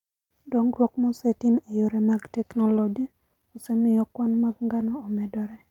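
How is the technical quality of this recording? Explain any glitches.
The recording has timing faults throughout: clock drift and repeated timing corrections.

Clock drift between sender and receiver runs through the whole clip. The sender's clock runs roughly 2% slower than the receiver's, so the jitter buffer keeps draining. This leaves the speech with a faintly unsteady, stretched pacing rather than one clean break.

Repeated timing corrections run from 0.46 s to 5.67 s. To make up for the slow sender, the receiver keeps repeating short pieces, playing the stretch at 98% speed and adding about 150 ms in total. These heard as slight, unevenly spaced hiccups and a wavering tempo.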